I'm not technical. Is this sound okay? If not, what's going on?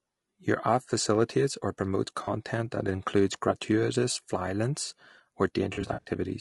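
No. Low-delay AAC compression, throughout: the voice sounds rough and grainy, likely from squeezing speech into the short, fast chunks video calls use, which keep too little detail.

AAC frame loss with concealment, at 2.23 s and 5.73 to 6.10 s: chunks of audio went missing, and the player patched the gaps by guessing from what came before. The first gap lasts about 40 ms, just after "app facilitates or promotes" and before "that includes gratuitous", and sounds like a brief smeared, noisy blip. The second is a scattered run of gaps over about a third of a second, the longest roughly 70 ms, heard as a longer stretch of smeary, phasey sound.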